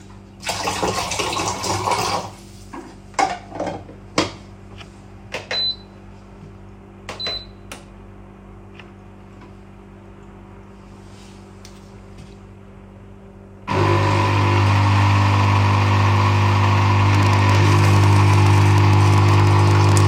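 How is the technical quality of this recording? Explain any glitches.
There's one glitch, and it comes right at the end. From 17.15 s to 20.01 s a train of clicks runs over the sound, roughly thirty of them at about 11.6 per second with an uneven spacing. Each is a short, similar pulse sitting around 10 dB above the material, so they stand out as ticking or popping. That points to something injecting pulses from outside the audio, likely electrical interference or a faulty connection or power supply.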